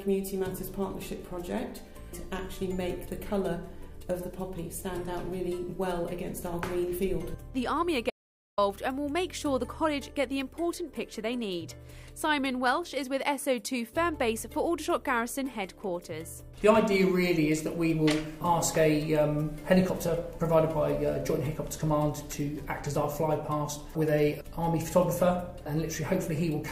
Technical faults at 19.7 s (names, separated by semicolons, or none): none